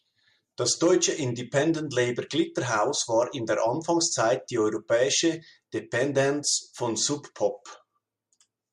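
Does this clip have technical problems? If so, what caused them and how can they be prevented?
No, there are no technical faults to hear in this speech clip. With nothing going wrong, there is nothing here that needs preventing.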